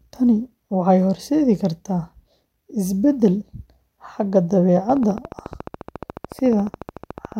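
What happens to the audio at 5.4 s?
At 5.4 s the speech carries a train of clicks, running from 4.90 to 7.33 s: about forty near-identical pulses at a steady 14 per second, likely from interference or a faulty connection or power supply. They are heard as regular ticking, and they show as evenly spaced vertical spikes on the waveform and thin broadband stripes on a spectrogram.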